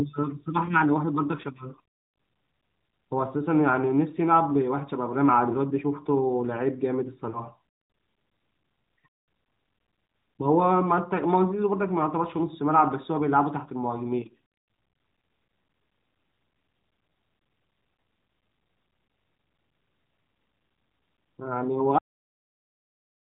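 Lost AMR speech frames at 0.66 to 0.74 s and 7.30 to 7.41 s: the decoder filled corrupted frames with its last pitch and vocal tract settings at falling gain. In this narrowband AMR sound, which points to the 12.2 kbps mode, that causes a brief warbling dip consistent with one lost 20 ms frame, then two. At 21.98 s the end is cut off: the final buffers were never played, so the sound stops mid-sound and falls straight to digital silence with no decay.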